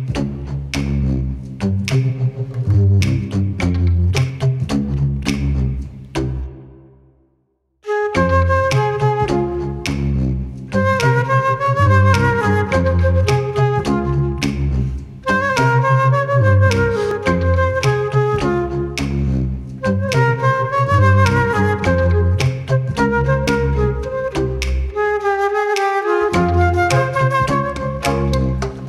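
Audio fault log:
4.30 s, 17.11 s and 23.48 s, dropped buffer (overrun): each is the sound jumping abruptly ahead, with no gap. The likely cause is samples being overwritten before they were read, losing a short stretch of roughly 20 ms at the first two and about 70 ms at the third, so the sound on either side is joined directly. The waveform shows a sharp discontinuity, and the spectrogram shows a thin vertical broadband line where the spectral content shifts.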